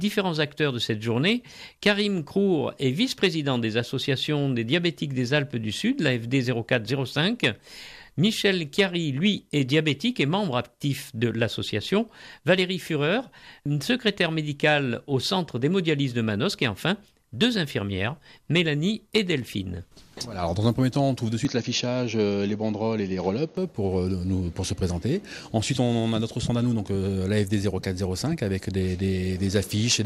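From 9.36 to 9.53 s, and again at 19.69 to 19.73 s, brief blips of noise appear: DAB burbling, where a small share of bit errors slips past error correction and makes single MP2 sub-bands jump in level. From 21.45 to 23.57 s the sound turns dull, with nothing above 6.7 kHz and no gap or level jump, likely because the input switched to a poorer device.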